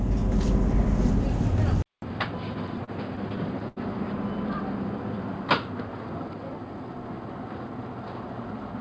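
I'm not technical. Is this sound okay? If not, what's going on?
No. At 1.82 s the sound cuts out for about 200 ms and comes back duller, noticeably quieter, with a faint new background noise. That points to an input switched to a poorer device, likely a different microphone or a headset in call mode, which carries a narrower range of sound.

From 2.54 to 3.78 s there are repeated stalls (stutter). Audio arrived late ten times, the longest wait about 82 ms. Each time the receiver stretched the last bit of sound to fill the wait, so nothing is lost, but playback drags and jerks.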